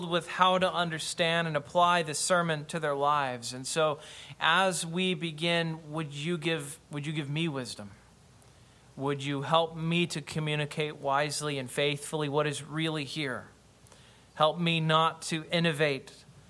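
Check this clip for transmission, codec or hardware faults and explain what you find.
Nothing stood out on listening; no transmission, codec or hardware problem was apparent anywhere in the audio.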